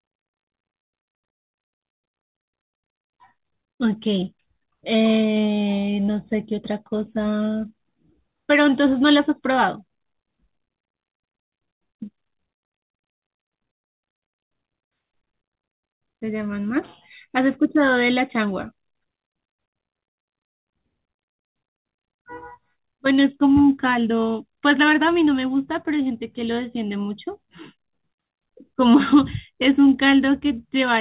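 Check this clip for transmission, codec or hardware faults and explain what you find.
Nothing wrong can be heard in this recording.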